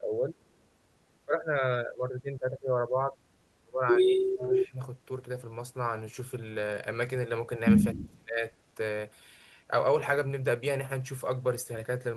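Speech, with speech suppressed in double talk at 0.0–0.35, 1.25–2.72, 2.88–3.17, 3.64–4.4, 4.69–4.79 and 7.94–8.44 s. The voice dips by around 10 to 30 dB, likely because an echo canceller turned down both talkers at once. An echo leak follows at 4.39–4.68 s. A copy of the voice returns 263 ms late, only about 5 dB quieter, likely loudspeaker echo the canceller failed to remove.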